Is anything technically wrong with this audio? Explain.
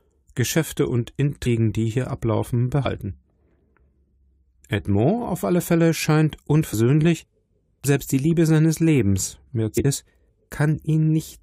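Yes. The audio has compressed frames skipped at five points: 1.45 s, 2.85 s, 6.72 s, 7.84 s, and 9.76 to 9.85 s. At each one, whole frames of the coded stream never reach the output. Either they are missing from the file or the decoder rejected them as damaged. The sound jumps forward by roughly a tenth of a second, or about half that at 2.85 s.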